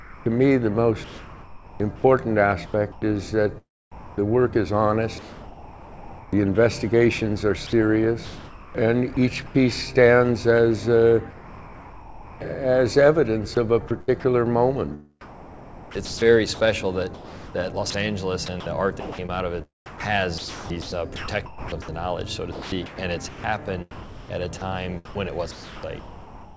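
Sound chopped by the voice detector runs from 0.0 to 3.02 s, 7.67 to 9.55 s, 13.55 to 14.24 s and 15.21 to 26.56 s. The likely cause is a sender-side detector that repeatedly switched transmission off and on, replacing quiet edges and passages with synthetic comfort noise. About 1.3 s, 0.66 s, 0.13 s and 4.6 s are swapped out, so the sound stutters. Sound dropped by the voice detector occurs at 3.92 to 4.18 s and 11.31 to 12.41 s, where the detector likely mistook quiet material for background and stopped sending altogether. Comfort noise fills 0.26 s and 1.1 s, and roughly 0.19 s and 0.45 s of actual sound vanish before the detector triggers again. Comfort noise in place of the background appears from 5.19 to 6.33 s. During this pause the real background, sitting about 19 dB below the loud parts, is replaced for 1.14 s by a steady, featureless hiss about 5 dB quieter, likely generated at the receiver from the sender's occasional spectral updates during discontinuous transmission. 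The call path itself carries nothing above 8 kHz, which fits a wideband G.722 link at 64 kbps.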